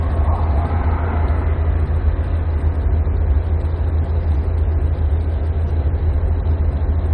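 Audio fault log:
No technical faults can be heard in this recording of sounds.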